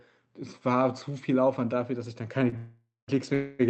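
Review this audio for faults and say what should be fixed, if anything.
A short stall from a late packet at 2.49 to 2.54 s: the jitter buffer ran dry, so the speech is held about 26 ms too long with a slight buzz or dip, then resumes with nothing lost.

Call audio freezes at 2.57 to 3.10 s and 3.34 to 3.61 s, likely from packets held up in transit that emptied the jitter buffer. The sound stretches into a fading buzz or hiss, going fully silent for about 0.21 s in the first freeze, and then picks up where it stopped after gaps of about 0.51 s and 0.25 s.

To prevent this, fix the congestion or jitter on the network path, and give the jitter buffer more adaptive headroom so that late packets arrive before it runs empty.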